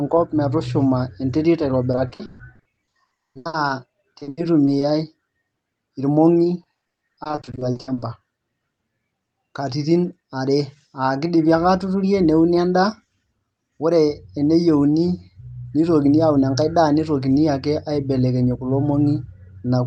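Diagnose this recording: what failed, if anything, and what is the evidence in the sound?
Choppy, robotic speech with missing pieces in three stretches: 1.91 to 3.71 s, 4.19 to 4.83 s, and 6.63 to 8.03 s. This is repeated packet loss (robotic sound) on the network feeding the call. Packets kept arriving lost or too late, and the receiver patched each hole by extending the last decoded sound. That repetition creates the synthetic tone. Nearly half of the first and third stretches is patched audio, with holes up to 200 ms, against about a quarter in the second. The Opus path itself is audible as its usual coding noise and a top end that stops near 12 kHz.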